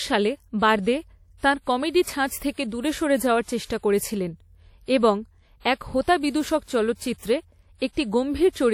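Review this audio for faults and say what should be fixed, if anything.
Throughout the speech, ringing, washy smearing and hiss that breathes with the voice are most likely WMA compression. Long transform blocks spread quantisation noise, which fits a low bitrate around 48 kbps. A spectrogram would show patchy, holed harmonics and nothing above 19.5 kHz. Keep a lossless master, or encode with a modern codec at a higher bitrate.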